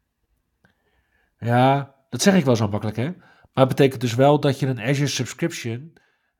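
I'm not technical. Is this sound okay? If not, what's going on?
No. At 5.39 s the speech suddenly becomes noticeably quieter, as if turned down, and stays that way to the end. The likely cause is one channel drops out: one side of the stereo recording went silent, so the combined sound loses that side's share.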